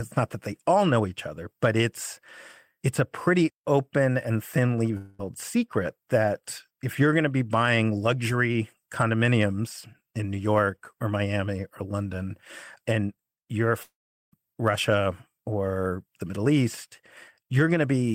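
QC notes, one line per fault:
4.97–5.21 s and 13.83–14.34 s, long network dropout: the stream likely stopped arriving for about 0.22 s after "pretty open and thinly" and about 0.5 s after "and you're". Concealment stretches the last sound into a fading buzz. The second fill decays into roughly 0.38 s of silence before audio resumes with that stretch missing.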